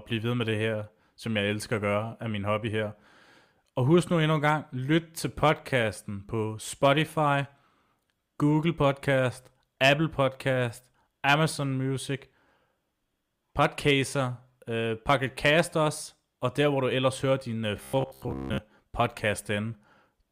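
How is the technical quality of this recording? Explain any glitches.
One fault stands out near the end. From 17.77 to 18.58 s, just after "ellers hører din uh", the speech turns into robotic sound from repeated short buffers, a rigid metallic buzz at 66.7 Hz that still loosely tracks the speech. The likely cause is audio arriving too slowly, so playback loops the most recent chunk of about 15 ms to fill the gap. That repetition covers most of the span, and the loop period sets the fixed buzz pitch.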